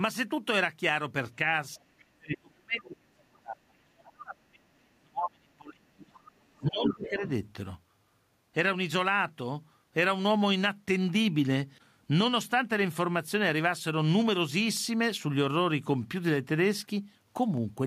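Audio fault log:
1.87–6.34 s, speech suppressed in double talk: The talker's level sinks across most of this span, by as much as about 40 dB at its deepest. The echo canceller likely mistook the overlap with the far end for echo and turned everything down.
3.34–3.39 s, 6.26–6.32 s, 6.54–6.61 s, other side's voice leaking through: Brief scraps of a second voice, each only 50 to 70 ms, slip through. They sit well under the talker, at roughly 30 to 40 dB down. The echo canceller likely left small remnants of the loudspeaker signal.
6.6–7.23 s, speech suppressed in double talk: A shorter, shallower dip follows, with the talker pulled down by about 15 dB. Both sides were again talking at once, and the canceller likely attenuated the near voice along with the echo.
6.83–7.29 s, other side's voice leaking through: Here the far voice comes through strongly, only about 5 dB below the talker, for nearly half a second. 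The loudspeaker echo was likely barely removed, so it competes openly with the near speech.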